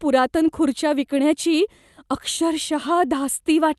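Nothing stood out on listening to this speech recording, which came through its WebRTC call path in the ordinary way.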